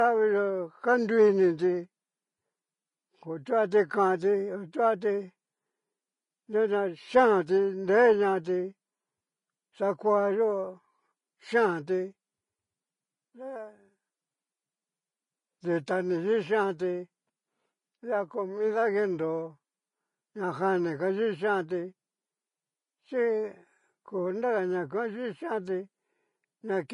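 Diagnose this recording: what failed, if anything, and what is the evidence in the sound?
The damage sits at the codec stage, and it runs through the whole speech clip. Nothing comes through above 10.6 kHz, and the top end that's left sounds hissy and grainy, with a roughened, smeared texture. That's the signature of Vorbis compression, likely at a low bitrate, something around 28 kbps. At that rate the encoder cuts the treble off early and quantises what remains so coarsely that the fine detail turns into noise.

At 15.86 s there's a brief burst of pre-echo. That's also a codec problem. A short hiss arrives just before a sharp onset and spreads about 12 ms ahead of it, so the attack sounds soft instead of crisp. The transform coder spreads its quantisation noise across the whole block. The attack landed late in its block, so noise pitched for the loud part leaked into the quiet moment just before it.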